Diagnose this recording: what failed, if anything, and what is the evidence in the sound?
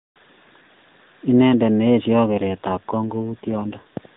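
An AMR rate drop at the codec stage, commanded by the network, runs from 2.30 to 3.96 s, starting just after "ne eesyoi". The speech turns rougher and more synthetic, which fits a step down from the 12.2 kbps AMR-NB mode to about 5.9 kbps. On a spectrogram the 4 kHz band edge and energy stay unchanged with no gap in the waveform, but harmonics smear and formants blur. Fewer bits leave the pulse excitation too coarse for clean voicing.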